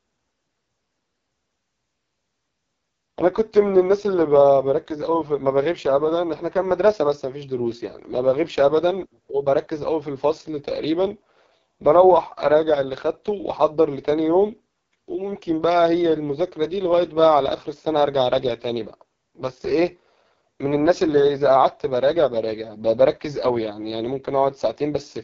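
AMR wideband (HD Voice) codec damage runs throughout the speech, from start to finish. The codec models the voice with pulse excitation and pads the top band with shaped noise, leaving nothing above 7.2 kHz. The heavy rough, raspy texture fits the lowest 6.6 kbit/s mode.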